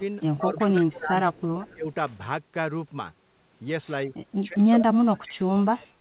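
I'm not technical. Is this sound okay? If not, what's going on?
No, not quite. From 0.37 to 1.58 s, around 1.74 to 1.87 s, and from 4.41 s to the end, the voice dips or cuts out. That's speech suppressed in double talk, likely the call's echo canceller muting the talker while the other person spoke. Around 0.58, 0.91, 1.36 and 1.61 s you catch faint scraps of the voice repeated about 0.16 s late. That's echo leak, likely where the loudspeaker's sound slipped back into the call.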